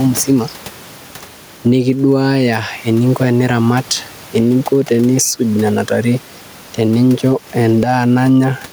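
Throughout the recording there is gain pumping, likely from input gain set far too high and a fast limiter or compressor clamping down whenever the speech gets loud. Each loud syllable pulls the level down, and in the pauses the gain climbs back up by around 10 dB, with the room noise sitting about 30 dB below the speech. The speech itself comes across squashed, with loud and soft parts pressed close together in level.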